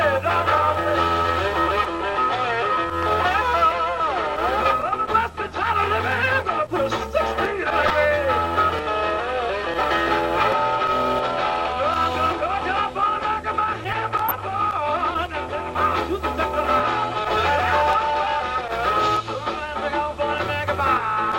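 Brief blips of noise break into the audio at 7.83–7.92 s, 14.29–14.31 s and 17.12 s. This is DAB burbling: weak reception let bit errors through, putting short blips of noise in single sub-bands.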